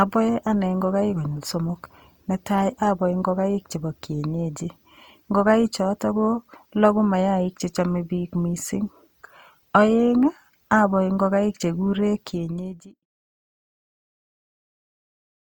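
Speech runs the whole clip with plainly audible codec damage, most likely Opus compression at a low rate in its music mode, around 24 kbps. Voiced sounds come out rough and grainy rather than swirly, because thin bands are filled with folded or noise-like energy instead of being left empty. A spectrogram shows full bandwidth up to about 20.3 kHz without gaps but with a speckled, noisy texture in the upper bands. The deliberate fade-out from about 12 s to 13.06 s tapers cleanly on the waveform.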